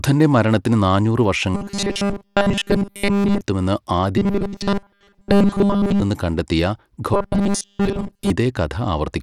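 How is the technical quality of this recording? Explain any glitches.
The speech is clearly degraded: a constant codec coarseness runs through it, and three stretches turn into a robotic buzz.

Bluetooth SBC compression, likely, with its simple sub-band bit allocation, leaves gritty, plainly audible coarseness and an unsteady treble, fitting a bitrate near 96 kbps.

Robotic sound from repeated short buffers, likely, occurs when audio arrives late and a 5 ms slice is looped. This sets a rigid 200 Hz metallic buzz, almost total from 1.55 to 3.41 s (just after "മരണത്തിന് നാനൂറ്") and 4.18 to 6.02 s, and partial from 7.14 to 8.30 s.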